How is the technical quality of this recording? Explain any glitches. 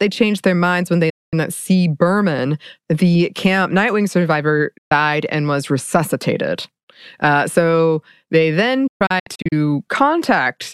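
Three digital broadcast dropouts interrupt the speech. At 1.10 to 1.34 s, right after "their minds when they", and at 4.78 to 4.92 s, just before "and was resuscitated", the receiver rejected corrupted frames and muted, fading to silence in about 8 ms. From 8.87 to 9.53 s, after "so they then", several short holes scatter, the longest about 128 ms, fitting lost 32 ms frames. The missing speech never returns.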